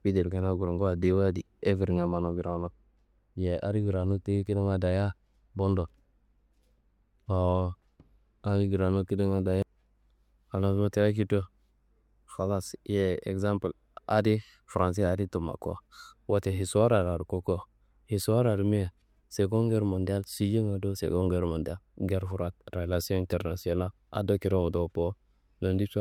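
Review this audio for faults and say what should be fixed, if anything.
No faults turn up in this audio, so nothing needs to be fixed.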